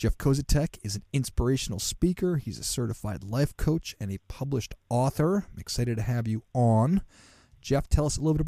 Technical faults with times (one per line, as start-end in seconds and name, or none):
none